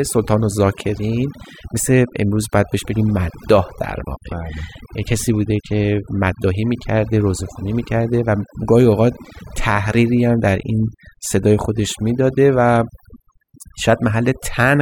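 Overdone noise removal runs throughout the speech, from start to finish. A noise reduction stage was pushed far too hard on a noisy recording, so any frequency band that drifts close to its noise estimate gets pulled down or shut off entirely, and the softer parts of the voice are caught along with the noise. The gaps fall to near silence sprinkled with twinkling, chirpy specks.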